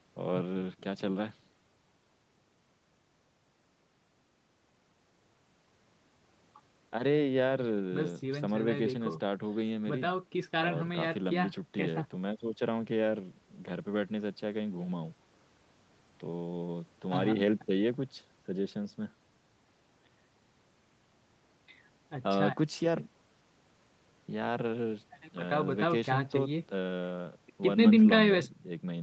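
Nothing goes wrong in this speech recording; it just has the usual sound of a call, with the lowest bass trimmed by the microphone processing and nothing above about 8 kHz, which fits a wideband Opus call link.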